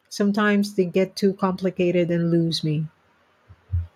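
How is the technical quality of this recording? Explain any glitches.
There is one glitch: an automatic gain rising from 0.17 to 2.91 s. The gain control judged the input too quiet and raised its gain by about 6 dB over those few seconds, so the voice and the background noise swell louder together.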